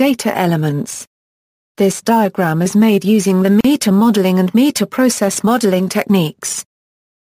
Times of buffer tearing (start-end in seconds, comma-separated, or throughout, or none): none